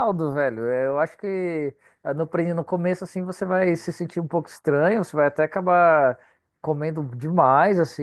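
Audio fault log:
No faults logged; the speech comes through Opus voice compression in its normal voice mode.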